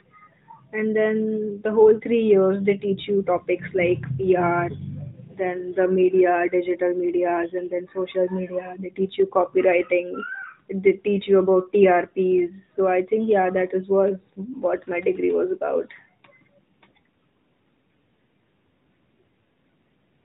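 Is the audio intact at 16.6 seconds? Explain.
Yes, at 16.6 seconds the speech is intact, with no dropout, glitch or other fault at that moment beyond the narrow band-limited sound of the AMR narrowband mobile codec it passes through.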